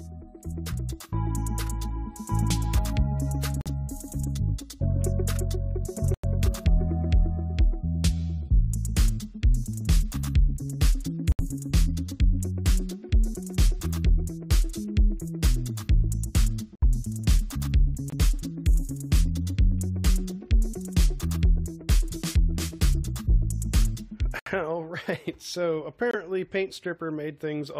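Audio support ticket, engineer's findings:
Corrupt frame muted at 3.61–3.67, 6.14–6.25, 11.32–11.40, 16.75–16.82, 18.10–18.14, 24.39–24.48 and 26.11–26.15 s. Abrupt silent holes, 36 to 110 ms, timing kept. Decoder rejected bit-damaged compressed frames and the player inserted silence.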